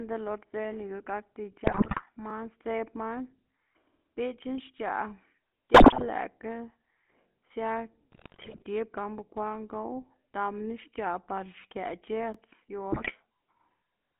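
Speech, coded with the GSM full-rate codec throughout. It sounds buzzy and gravelly, confined to roughly 200 Hz to 3.4 kHz, which fits a 13 kbps GSM link. GSM bit errors corrupt the decoded speech at 1.64–2.02 s, 5.74–6.09 s, 8.12–8.64 s and 12.92–13.13 s. Damaged filter, pitch and gain values make squawks, pops and gargling. Overlapping chunks replay 20 ms of sound at 2.30–2.32 s, 7.32–7.34 s and 12.34–12.36 s. Each join is heard as a brief stutter, repeating every 5 s.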